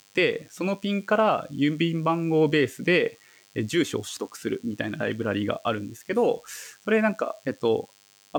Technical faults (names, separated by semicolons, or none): DECT cordless phone buzz